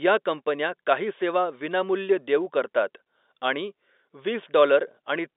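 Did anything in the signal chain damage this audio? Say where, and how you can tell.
No, none of the stages in the chain damaged this speech. It carries the G.711 telephone coding of an ordinary phone line, with the sound confined to roughly 300 Hz to 3.7 kHz, nothing above about 3.8 kHz, and at most a faint trace of the codec's own quantisation noise.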